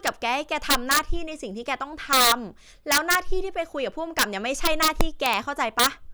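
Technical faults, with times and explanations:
0.07 s, 0.70–0.99 s, 2.13–2.32 s, 2.92–3.15 s, 4.19–4.23 s, 4.65–5.33 s and 5.79–5.87 s, integer overflow: loud speech peaks break into harsh, violent cracks, far sharper than ordinary clipping. The level went about 2 to 4 dB past the largest value the integer format can hold. Instead of being held at full scale, each overshooting sample wrapped around to the opposite extreme, so the waveform jumps across the entire range.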